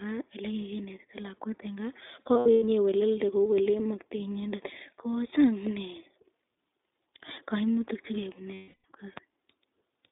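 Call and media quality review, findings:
iLBC codec, full clip: narrowband, nothing above about 3.7 kHz or below 150 Hz, slightly rough synthetic texture from frame-independent excitation coding in 20 ms frames, consistent with the 15.2 kbps mode. Unlike a plain low-pass, the roughness sits inside the band, not only missing treble.

Lost iLBC frames, 2.34–2.64 s and 8.54–8.85 s: held buzzy-breathy vowel where the decoder repeats the last pitch cycle with noise. First loss is scattered over about 280 ms, longest run around 100 ms. Second loses 300 ms in total, and the fill fades. Recovery is immediate afterwards, unlike codecs whose state carries over.

Loud pop, 9.17–9.20 s: single sharp transient about 15 dB above the signal, speech continuing underneath. Likely a voltage step from a plug, switch or driver glitch. Unlike a dropout or concealment, nothing is removed; the pulse is added on top.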